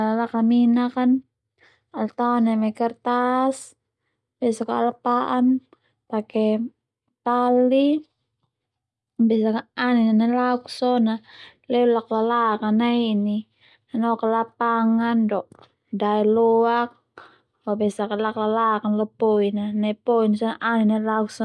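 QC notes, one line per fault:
No faults heard in this speech clip.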